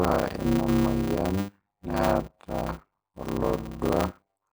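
Speech throughout all of this clip carries a block size mismatch (padded). A steady buzz at 100 Hz sits under everything, and the talking drags at roughly half speed (0.533×) while keeping about its normal pitch. Each block holds only part of what the next stage reads, which fits 256-sample writes, so zeros fill the remainder. On a waveform this shows as evenly spaced flat gaps every 10 ms. A spectrogram shows thin vertical stripes and a 100 Hz harmonic comb.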